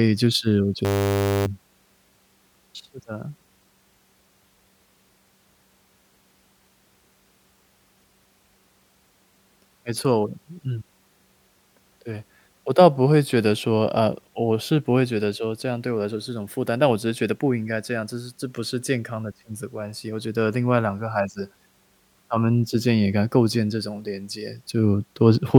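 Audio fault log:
0.85–1.46 s, system hang loop: the driver froze while the hardware kept replaying a 10 ms buffer, so a steady 100 Hz buzz replaces the speech, with well over half a second of audio lost. On a spectrogram this shows as harmonics spaced 100 Hz apart, and on the waveform as an identical repeating cycle.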